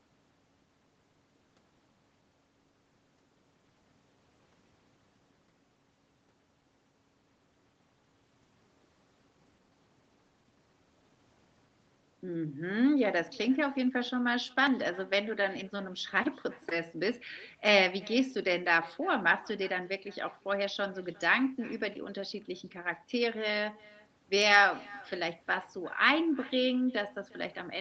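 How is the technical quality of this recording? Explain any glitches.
The recording carries a steady echo fault from start to finish. The speech itself sits in a call-style band with nothing above 8 kHz.

Echo with no canceller runs throughout. The far end played the call on a loudspeaker, and its microphone fed that back. Nothing removed it. Each phrase returns roughly 0.4 s later, at about 25 dB below the speech, as a faint, thin shadow.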